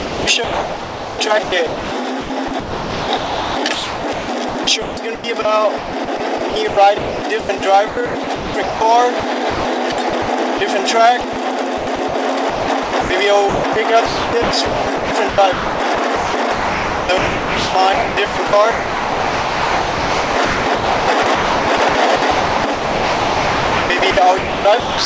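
Sound chopped by the voice detector, 0.00–10.61 s and 11.21–25.05 s: likely sender gating, swapping about 4.8 s and 8.5 s for comfort noise, so sound cuts out.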